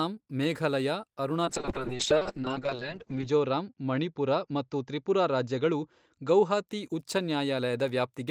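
From 1.46 s to 6.73 s, a call bitrate drop starves the encoder, and the speech turns rough and muffled as the bandwidth narrows from 20 kHz to 8 kHz. It is worst for about 1.8 s, consistent with 32 kbps falling to about 6 kbps. Unlike packet loss, nothing drops out, and unlike a fixed filter, it recovers.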